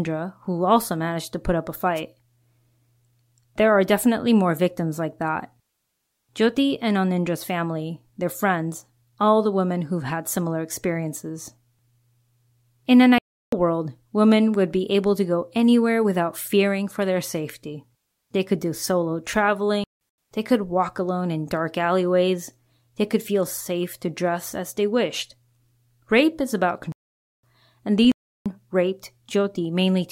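At 1.95 s a brief swish of static, about 60 ms long, rides over the speech and clears by 2.01 s. This is a wireless microphone noise hit. The radio link of an analogue FM microphone faded for an instant as reflected signals cancelled one another, and the receiver's own noise rose into the gap until the signal came back.

Four times the speech drops into sudden, total silence and then resumes with its timing intact. These are corrupt frames muted: the gaps run 13.18 to 13.53 s, just before "world women would be"; 19.84 to 20.01 s, just before "they could walk alone"; 26.92 to 27.42 s, right after "is about"; and 28.05 to 28.46 s. Each hole begins abruptly and spans several frame lengths. Flipped bits made the decoder reject those compressed frames, and the player filled their place with silence rather than sound.

From 23.48 to 23.60 s there is a disturbance lasting about 0.12 s, after which the audio is clean again. 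This is a corrupt FLAC frame. Bits were damaged inside losslessly compressed frames and the decoder did not verify the checksum. From the damaged point on, its prediction ran on wrong numbers and produced garbage instead of the signal. Clean audio returned once decoding reached an intact frame.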